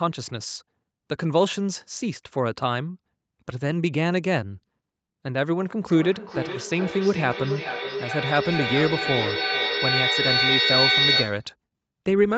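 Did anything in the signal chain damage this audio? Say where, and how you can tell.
Yes, there's feedback echo between two devices from 5.88 to 11.5 s: the speech keeps coming back roughly every 0.4 s, and the repeats build instead of fading, peaking about 2 dB above the speech. That's an acoustic loop where a second device replays the call into this microphone, outside the reach of this echo canceller.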